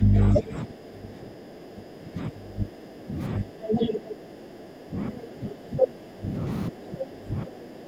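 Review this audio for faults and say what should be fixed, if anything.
The echo canceller likely could not tell the near talker from the loudspeaker echo while both sides spoke, so it turned everything down. This is speech suppressed in double talk. The speech dips briefly from 0.00 to 0.16 s by about 10 dB. It is held down for most of the stretch from 0.33 to 6.45 s, falling as much as about 15 dB. It drops again from 6.69 to 7.87 s, by up to about 20 dB.

The same canceller also likely failed to remove all of the far-end playback from the microphone signal, so the other side's voice leaks through. A short scrap from 3.68 to 3.99 s comes in at roughly the level of the near speech. A brief burst at 5.79 to 5.87 s is somewhat louder than the speech itself, about 5 dB above it.

To prevent both, give the canceller a better-converged echo model with proper double-talk detection, and reduce loudspeaker-to-microphone coupling through lower playback volume or a headset.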